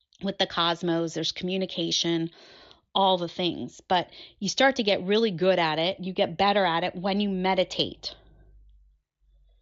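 Nothing technically wrong can be heard in this speech recording. It carries the sound of a Bluetooth mSBC headset codec working normally, with the audio band reaching up to about 8 kHz and only the light coding character expected of that wideband link.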